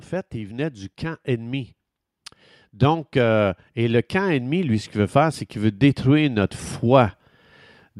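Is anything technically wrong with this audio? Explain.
Yes. From 2.79 to 7.13 s the automatic gain control, judging the input too quiet, raises its gain gradually, by about 8 dB in total. This automatic gain rising lifts the speech and the background noise together, so the whole sound swells slowly louder across those four seconds.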